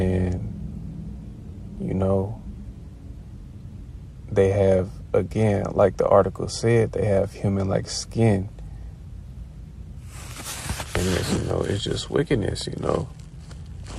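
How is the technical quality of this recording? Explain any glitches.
No dropouts, clicks, distortion or timing disturbances turn up anywhere in the recording, so there are no glitches to explain.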